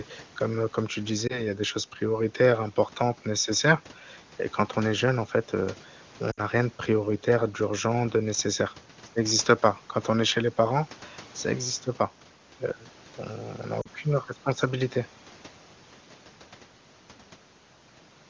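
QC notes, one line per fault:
1.27–1.42 s, 6.31–6.40 s, 13.81–13.88 s: lost AMR speech frames. About 20, 60 and 40 ms of speech go missing, consistent with one, three and two 20 ms frames. The decoder repeats the last good pitch and vocal tract settings at falling gain, so the single-frame gap sounds like a short warble or dip, and the longer ones drop to near silence within two frames. On a spectrogram, harmonics freeze into flat horizontal streaks that fade, and the waveform envelope sags before speech resumes slightly weak.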